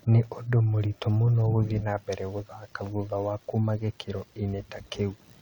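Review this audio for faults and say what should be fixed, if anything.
Nothing stood out on listening to this speech recording, so there is nothing that needs fixing.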